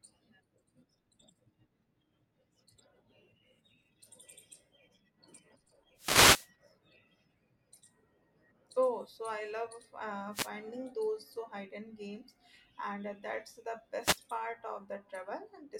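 The radio link from an analogue FM wireless microphone drops out three times as reflected signals cancel at the receiver, producing wireless microphone noise hits. In each fade the receiver's own noise surges up. The longest runs from 5.96 to 6.50 s, a swish of static about half a second long. Two shorter bursts of roughly 0.2 s follow, at 10.32 to 10.51 s and at 14.00 to 14.20 s.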